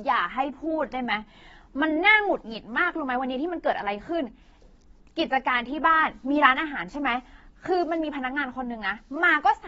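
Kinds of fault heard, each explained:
AAC compression: The speech is plainly damaged by lossy coding, most likely AAC-LC, which quantises each frame's frequency content against a hearing model and discards what it judges least audible. Here nothing survives above 7.6 kHz, so the whole clip sounds dull, with a smeared, warbling texture on sustained sounds and fizzy sibilants. That hard band limit and the strength of the damage fit a low bitrate of around 24 kbps.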